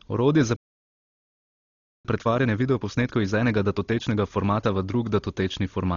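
Across the whole clip the speech is dull and band-limited. Tonal parts of the voice carry a rough, fluttering noise, and the damage is heavy. This points to likely Dolby Digital compression at a very low bitrate, something near 32 kbps. At such rates the encoder narrows the band and leaves many frequency lines without mantissa bits. The decoder then fills those lines with dither noise, which causes the roughness.

At 0.56 s the speech stops dead in mid-flow. Silence holds until 2.05 s, a gap of about 1.48 s. This is a playback stall. The player most likely ran short of data or had its thread blocked, so it produced no output until it recovered.

From 2.05 s to 5.05 s the speech runs hurried, at about 1.15 times normal speed. The pitch stays unchanged. This is time-compressed catch-up. After the stall, the player works off its backlog by cutting out short pieces and cross-fading across the joins. 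Those joins give the speech a rushed rhythm. Normal pacing returns at 5.05 s.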